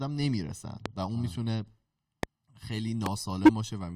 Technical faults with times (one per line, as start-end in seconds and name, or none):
0.86-0.88 loud pop
2.23-2.25 loud pop
3.06-3.08 loud pop
3.45-3.49 corrupt frame decoded